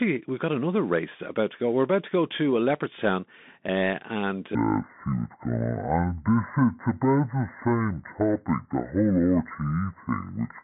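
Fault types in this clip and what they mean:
Bluetooth CVSD headset codec: The speech passed through the narrowband headset link, whose encoder sends one up-or-down bit per sample and adapts its step size, consistent with a 64 kbps CVSD stream. Here the line band runs from about 200 Hz to 3.6 kHz, and nothing reaches past 4 kHz, so the sound is thin and boxy. The codec damage is plainly audible: s sounds turn scratchy, loud bright moments distort as the step falls behind, and a granular hiss sits underneath.
Section at the wrong speed: From 4.55 s to the end, playback runs at 0.578 times the original rate, likely because that stretch was fitted to the wrong clock during editing or playback. Since speed and pitch are tied together, the speech abruptly drops by roughly ten semitones and slows to little more than half its pace. It sounds deep, dragging and sluggish compared with the first part of the clip.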